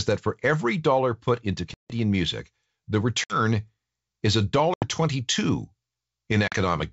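Packet loss on an ADPCM call strikes at 1.74–1.93 s after "every dollar put into" (160 ms dropped, several packets), at 3.24–3.38 s after "music the" (60 ms), at 4.74–4.87 s after "is a" (80 ms), and at 6.48–6.55 s (40 ms). Each gap is a hard-edged silence. When the speech returns, the decoder's predictor and step size no longer match the sender's, so it comes back with brief, slight distortion.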